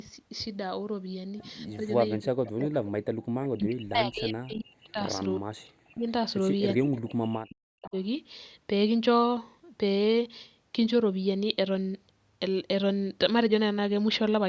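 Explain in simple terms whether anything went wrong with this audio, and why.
The talker's voice repeatedly sinks almost to nothing or breaks into pieces, from 1.82 to 2.79 s, 3.53 to 5.0 s, 5.38 to 6.09 s and 6.78 to 7.95 s. This is speech suppressed in double talk, likely because both sides spoke at once and the echo canceller turned the talker down along with the loudspeaker echo.

Between 3.14 and 3.25 s, the background room sound briefly drops away for about a tenth of a second, then returns. This is background gated by the echo canceller: while the loudspeaker played, the canceller pulled the microphone down hard, then released it.

At 3.43 to 3.48 s and again at 7.86 to 7.90 s, a faint, short scrap of voice arrives roughly 0.39 s after the original. This is echo leak, likely from a loudspeaker on one side whose echo canceller let some pickup slip back into the call.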